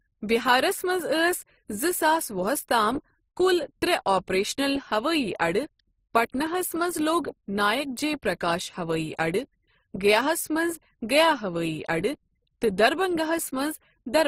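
A speech recording with a hard ceiling at about 15.9 kHz throughout and two layers of coding artefacts audible together. This points to transcoding between lossy codecs, likely a low-rate MP3 around 42 kbit/s re-encoded as Opus at roughly 24 kbit/s. Opus wastes bits reproducing the MP3's artefacts, then adds its own, while the earlier band limit persists.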